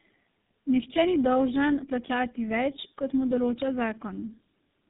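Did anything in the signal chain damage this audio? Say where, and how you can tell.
Yes, at the codec stage. Tandem speech coding runs through the whole clip. The speech sounds rough, muffled and warbly. A spectrogram shows a hard ceiling at 3.8 kHz and smeared, wobbling harmonics. AMR-NB, iLBC and GSM full rate coders in series each re-encode the previous coder's errors, compounding them.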